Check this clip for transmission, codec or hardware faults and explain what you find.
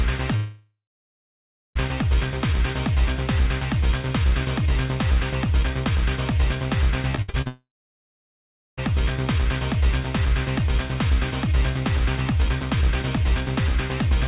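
There are two kinds of transmission fault: two long network dropouts and a short burst of repeated packet loss that runs straight into the second dropout. Everything sits inside a call-codec band, with nothing above 4 kHz, which fits G.711 A-law at 64 kbps.

Long network dropout, 0.36 to 1.77 s and 7.47 to 8.79 s: The audio likely stopped arriving for about 1.4 s and then about 1.3 s. The receiver stretches the last sound into a fading buzz, then leaves silence for roughly a second in each case (about 0.96 s and 1.1 s) before the sound resumes further on. It is one continuous hole, unlike the stutter of repeated loss.

Repeated packet loss (robotic sound), 7.11 to 7.47 s: Five short gaps, the longest 63 ms, are each patched by repeating the last sound, so about half of this stretch is filled-in audio. The result is choppy sound with fragments missing. It differs from a dropout because real sound keeps breaking through between the patches, with no extended silence, until the full dropout takes over at 7.47 s.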